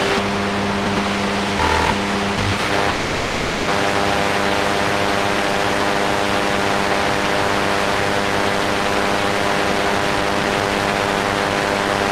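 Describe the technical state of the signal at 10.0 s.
At 10.0 s the audio sits inside a jitter buffer speed-up that runs from 9.65 to 11.87 s. The receiver was holding more audio than its target, so it repeatedly cut out short pieces one or a few pitch periods long, roughly half a second in total. Playback runs at 123% speed with pitch unchanged, which sounds clearly hurried. On a spectrogram, harmonic lines keep their frequencies while events crowd closer together in time.

Hard clipping is also present here, as it is across the whole clip. The signal was driven about 2 dB past what a stage could pass, flattening a little under one percent of samples. Each flattened peak adds harmonics high in the spectrum, heard as crackle on the loudest moments. In the waveform those peaks have squared-off tops instead of rounded ones. On a spectrogram they show as thin vertical streaks of energy reaching up into the high kHz range.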